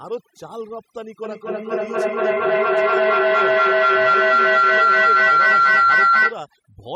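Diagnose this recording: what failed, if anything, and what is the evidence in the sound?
Across the whole clip the background drops and breaks up into twinkling specks, and the speech has its quieter parts dropping out. This is overdone noise removal at the call-processing stage. A noise suppressor was set too aggressively, so it pushes individual frequency bands far down or off whenever they come close to its noise estimate. Low-level parts of the speech fall below that line and are removed along with the noise.

From 1.24 s to 6.43 s a tone grows into a sustained howl of around 1.5 kHz, with repeats roughly every fifth of a second. At its peak it is about 15 dB louder than the speech. This is feedback howl, an acoustic loop at the playback end of the call. Two devices in the same room are on the call, and each pass from loudspeaker to microphone adds gain. The repeats narrow onto the frequency the loop favours, and their spacing reflects the loop delay. 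The howl stops at 6.43 s, when the loop is broken.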